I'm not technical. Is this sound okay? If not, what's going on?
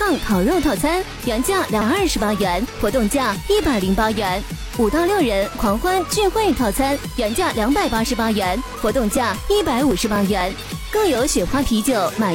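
No. At 1.77 to 1.82 s there is damaged data in a compressed stream. Bad bytes confuse the decoder, causing a short blip. From 8.67 to 11.15 s come periodic USB or driver dropouts. About every quarter second, roughly 2 ms of sound is skipped, giving around ten regular ticks.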